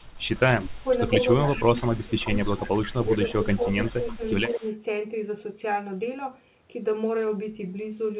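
This is a narrowband speech recording with nothing above 4 kHz, consistent with G.711 A-law at 64 kbps. From 0.00 to 4.75 s an echo leak is audible: a copy of the speech trails by about 129 ms at roughly 20 dB below the direct voice, likely from a loudspeaker echo canceller on the far end passing residual pickup back down the line. Over the same stretch the speech is suppressed in double talk, dipping by about 10 to 15 dB at 0.46–0.86, 1.46–2.32, 2.57–2.93, 3.35–3.61, 4.01–4.22 and 4.55–4.64 s. This pattern likely comes from the canceller attenuating both talkers when it cannot separate them from the echo.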